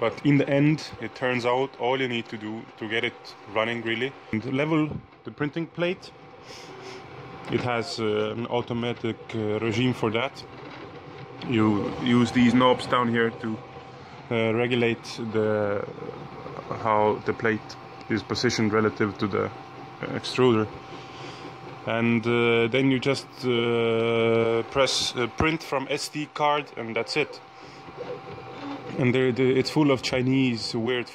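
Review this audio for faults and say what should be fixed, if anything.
Nothing here needs fixing; I listened all the way through and didn't hear any problems worth flagging.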